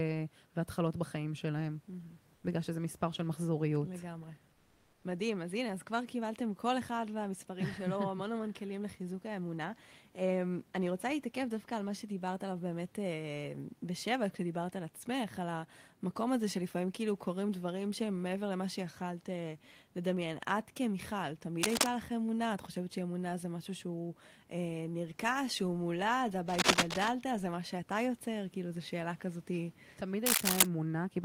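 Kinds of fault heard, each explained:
Comfort noise in place of the background: In two pauses in the speech, at 2.35 to 2.43 s and again for half a second from 4.53 to 5.03 s, the natural room hiss gives way to a flat, textureless noise, about 3 dB and then about 1 dB quieter than the real background. This is likely Opus discontinuous transmission: the sender went silent when no speech was detected, and the receiver filled the gap with synthetic noise.
Cable scratch noise: Three bursts of dense, uneven scratching and rustling cut across the speech, at 21.63 to 21.87 s, 26.48 to 27.09 s and 30.26 to 30.67 s, each standing out roughly 5 dB above the speech itself. The rough, crackling texture likely comes from a worn cable or connector being moved, its contact resistance changing rapidly and injecting noise straight into the signal.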